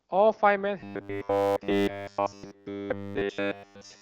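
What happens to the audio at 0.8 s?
From 0.80 s to the end at 4.01 s, the speech turns into a rigid 100 Hz metallic buzz, the robotic sound from repeated short buffers. It is likely caused by audio arriving too late, so every stretch is a replayed 10 ms fragment.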